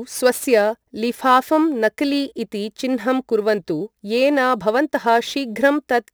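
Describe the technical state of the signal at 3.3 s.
Crude rate conversion at 3.3 s, as throughout: unfiltered sample dropping from 48 kHz to 44.1 kHz leaves a gritty, inharmonic fizz about 30 dB under the speech.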